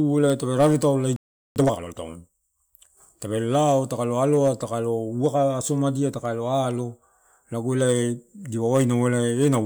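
The player most likely ran out of buffered data, or its playback thread was blocked, causing a playback stall in this speech clip: from 1.16 s to 1.56 s the output drops to silence for about 0.40 s, cutting the talker off mid-flow before the sound resumes. Once data arrives again, the player works off the backlog it built up during the gap by trimming small slices of audio and cross-fading the joins, a time-compressed catch-up that runs from 1.56 s to 1.94 s. Over that stretch the speech plays at twice its normal rate while keeping its normal pitch, so it sounds rushed, before settling back to normal timing.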